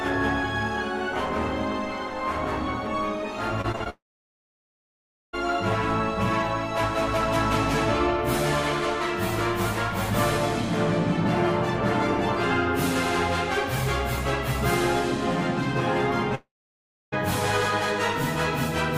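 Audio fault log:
3.61–3.88 s, repeated packet loss (robotic sound): four gaps opened in quick succession, the longest a 40 ms hole, about 100 ms lost in all. Each gap was patched by stretching the preceding sound, so over a third of this stretch is synthetic fill, giving a choppy stutter with pieces missing.
3.90–5.35 s, long network dropout: a likely break in the incoming stream left about 1.44 s of audio undelivered. The receiver briefly extended the last sound before giving up, and about 1.33 s of near-silence follows before the audio resumes with that section missing.
16.35–17.14 s, long network dropout: another likely interruption cost about 0.78 s of audio. A short decaying continuation of the final sound gives way to roughly 0.64 s of silence, then playback picks up again past the lost portion.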